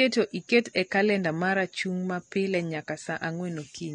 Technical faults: AAC compression

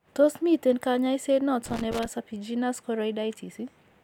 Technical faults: loose connector crackle

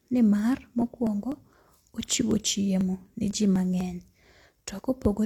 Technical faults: periodic USB or driver dropouts

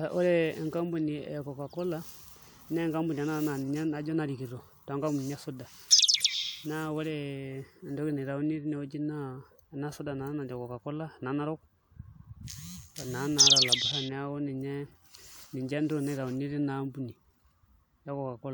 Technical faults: none

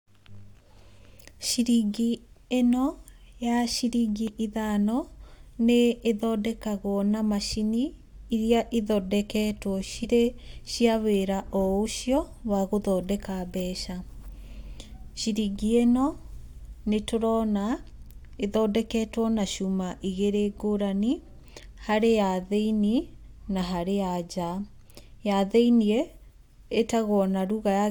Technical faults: damaged data in a compressed stream

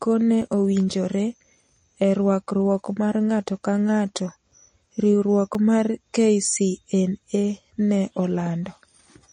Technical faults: MP3 compression; periodic USB or driver dropouts

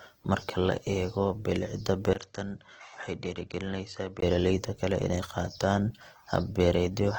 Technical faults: low-bitrate audio saved at a high bitrate; input switched to a poorer device

